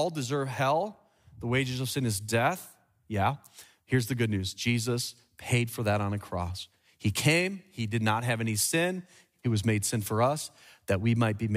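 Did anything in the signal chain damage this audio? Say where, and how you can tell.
Yes. Periodic USB or driver dropouts run from 6.63 to 10.62 s, just after "for that on a": three ticks at a steady 1.99 s spacing. Each skips about 10 ms of speech with no silence inserted, which points to a background task stalling the USB bus or audio driver.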